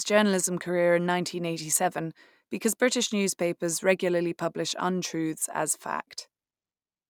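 Audio missing between chunks at 5.42 s: the speech jumps forward abruptly, with a brief sliver of sound, around 20 ms, gone and the two sides butted together without any gap of silence. The likely cause is a recorder or processor handling the audio in blocks of about 3 s and dropping about 20 ms while it closes one block and starts the next, so the join is heard as a small skip.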